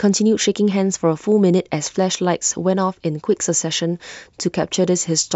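Nothing stood out on listening to this speech recording.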